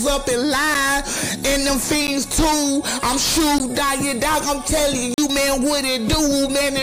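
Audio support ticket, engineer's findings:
Block of digital silence, four events: 0.74 s (7 ms), 2.07 s (10 ms), 3.58 s (15 ms), 5.14–5.18 s (40 ms). First two heard as ticks or dips; 3.58 s borderline; 5.14 s a short hole. Waveform: flat line, hard cut in and out, no fade. Spectrogram: thin vertical blank column, widest at 5.14 s. Probable component: output buffer not filled in time, or invalid values from a calculation stage.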